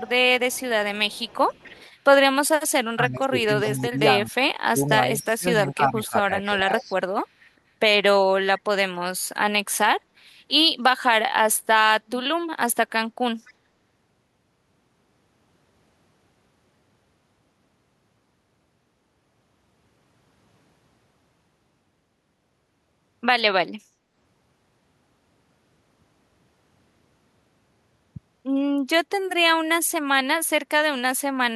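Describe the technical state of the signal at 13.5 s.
Echo leak, 13.46 to 13.53 s: a faint copy of the speech returns 254 ms late, about 30 dB down, likely loudspeaker pickup that one side's echo canceller missed.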